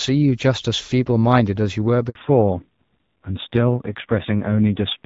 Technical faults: handover gap; fallback to narrowband

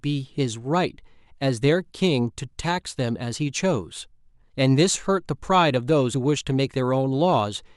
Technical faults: damaged data in a compressed stream

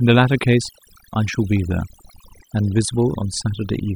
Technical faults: overdone noise removal

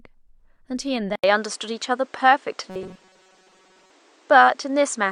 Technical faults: input switched to a poorer device; robotic sound from repeated short buffers

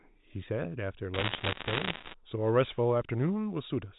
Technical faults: bit errors on a digital phone line

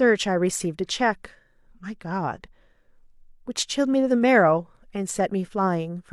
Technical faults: none

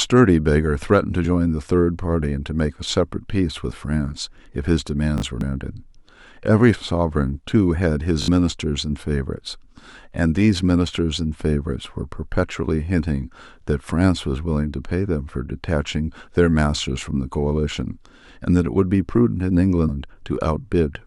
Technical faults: damaged data in a compressed stream; repeated buffer

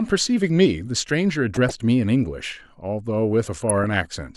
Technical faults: DAB burbling

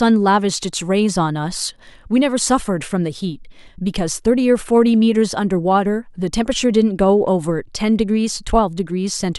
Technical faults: none

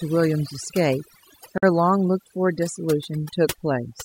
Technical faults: overdone noise removal; gap at a join of encoded pieces

